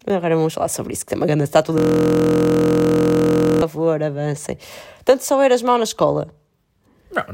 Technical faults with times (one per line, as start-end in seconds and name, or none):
1.78-3.62 system hang loop